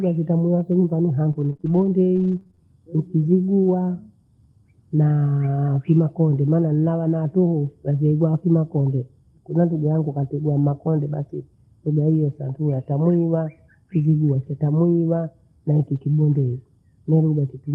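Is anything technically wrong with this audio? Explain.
Yes, there are two faults in this speech clip.

From 1.33 to 2.60 s, just after "nitameavyo nyumbani", there is repeated packet loss (robotic sound). Packets kept failing to arrive, and each hole was patched by stretching the preceding sound. That concealment fills about 14% of the stretch, with the longest gap about 26 ms, so the speech turns choppy with pieces missing.

From 15.95 to 15.98 s, right after "na huku", a lost packet was rebuilt from error correction. The following packet carried a low-bitrate copy, so the decoder played that copy instead of leaving a gap. The result is a brief patch of rougher, noisier sound.

Both faults sit on an Opus call path whose audio tops out near 12 kHz, consistent with a bitrate around 32 kbps.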